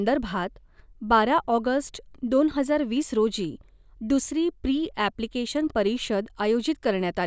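No technical faults can be heard in this recording.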